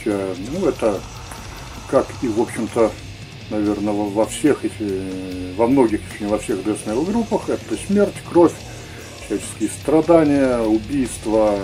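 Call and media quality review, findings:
Clock slip clicks, 0.14 to 11.52 s: faint regular ticks roughly every 150 ms, around seventy in all. Likely unsynchronised clocks between two devices, one sample dropped or repeated per slip; the rate points to an offset near 150 ppm.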